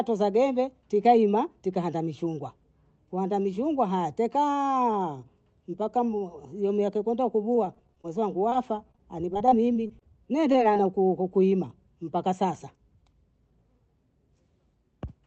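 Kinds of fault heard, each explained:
Repeated packet loss (robotic sound): Three choppy stretches run from 7.55 to 8.06 s after "hiyo miaka kenda", from 8.91 to 10.03 s, and from 10.41 to 11.11 s before "kuima mpaka sasa". Holes up to 30 ms are patched by stretching the last sound, giving a chopped texture with pieces missing. It differs from a single dropout because the gaps keep recurring in quick succession.
Short concealed packet loss: One isolated hole at 8.50 s loses about 20 ms. The receiver fills it by continuing the preceding sound, then blends back into the real audio. It is heard as a brief smear or wobble, not sustained robotic chopping, because it stands alone rather than repeating.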